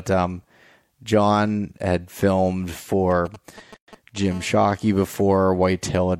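From 3.11 to 4.32 s the speech picks up a galloping dit-dit-dit of short buzzes at about 217 Hz, roughly 20 dB below the speech. These are GSM signalling bursts: a nearby 2G phone sends brief groups of radio bursts while signalling, and the audio circuitry rectifies them into sound.

Within that stretch, from 3.76 to 3.88 s, the speech drops into a 115 ms hole with smeared edges, then resumes exactly where it stopped. This is a gap at a join of encoded pieces: separately encoded sections were spliced untrimmed, leaving the encoder's start delay and final-frame padding as silence.

At 4.32 s the pattern turns into a steady, hard, raspy buzz at 217 Hz, rich in harmonics and unrelated to the speech, about 28 dB below it, lasting until 5.47 s. This is GSM phone buzz: the phone has moved into a call, transmitting in bursts 217 times a second, and each rectified radio pulse becomes part of the buzz.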